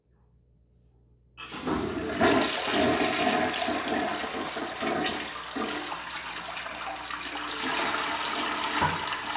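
No technical faults can be heard anywhere in this recording of sounds. There is no moment that needs a time mark or an explanation.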